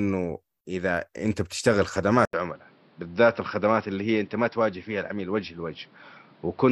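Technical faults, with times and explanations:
2.25–6.71 s, input switched to a poorer device: after an 80 ms gap, nothing above 5.6 kHz remains, with new background noise roughly 30 dB down and unchanged level. A likely device change.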